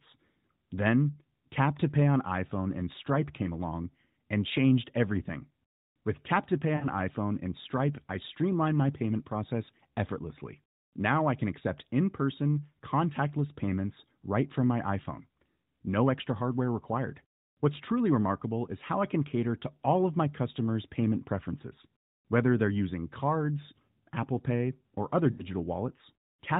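Radio errors corrupted speech frames, so the AMR-NB decoder filled each gap by reusing its last good pitch and vocal-tract settings at falling gain. These lost AMR speech frames, at 6.76 to 6.88 s and just after "or other" at 25.32 to 25.45 s, draw the speech out into a fade toward silence.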